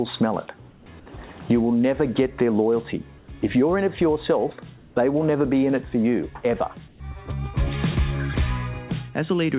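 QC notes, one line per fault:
0.70–0.86, 3.18–3.28, 4.78–4.96 and 6.88–7.00 s, comfort noise in place of the background: in each short pause of 100–180 ms, the real background turns into a steady, featureless hiss, about 3–4 dB quieter (about 7 dB at 6.88 s). This is likely discontinuous transmission with synthetic fill. Unlike a dropout or gate, the pause never goes silent, and the hiss stays band-limited below 4 kHz like the call path.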